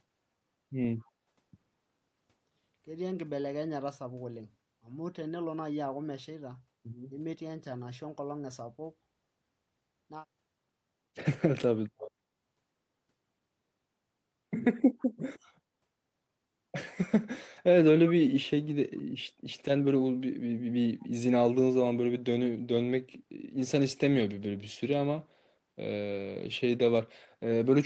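At 1.05 to 1.1 s and again at 14.99 to 15.06 s, a faint echo leak trails the speech by 151 ms, likely loudspeaker pickup that the far end's echo canceller left in. At 7.07 to 7.12 s, the speech drops by roughly 20 dB for about 50 ms, likely speech suppressed in double talk when the canceller ducked overlapping audio.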